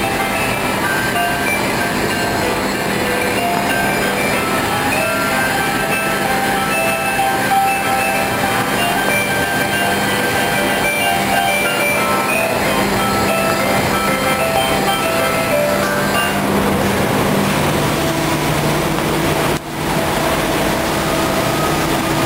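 Loud pops hit at 1.48–1.50, 3.57–3.59, 9.09–9.11 and 13.50–13.52 s. A double pop follows at 14.56–14.74 s, then another pop at 18.99–19.01 s. Each is a sharp spike well above the sound, which carries on underneath. The likely cause is a sudden voltage pulse, such as static or a switch.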